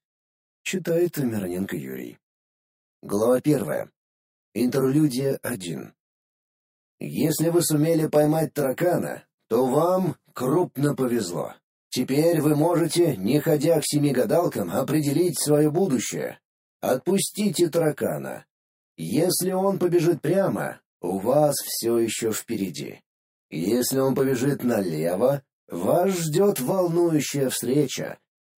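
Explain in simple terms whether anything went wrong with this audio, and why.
Something went wrong for the whole clip. This is channel delay, or comb filtering. One channel arrives about 20 milliseconds late. Mixed together, the two channels cancel at evenly spaced pitches, starting near 30 hertz. That makes the sound rough or slightly doubled.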